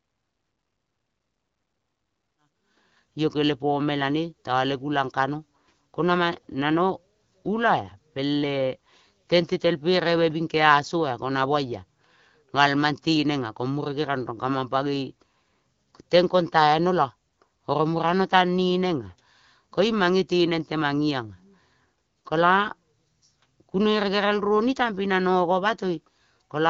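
No technical faults can be heard in this audio.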